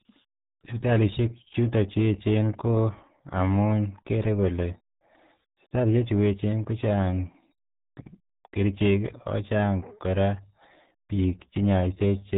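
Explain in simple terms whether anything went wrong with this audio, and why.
The speech sounds muffled and gargly from start to finish, with nothing above 3.8 kHz. That comes from the RealAudio 14.4 codec, an old format built for dial-up modems that squeezed the sound so hard it removed the high end and smeared what remained.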